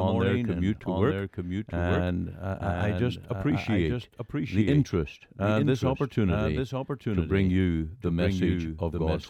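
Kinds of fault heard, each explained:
Doubled audio track: a second copy of the speech trails about one second behind, somewhat quieter, with no decay, likely from a slower capture path or misaligned edit.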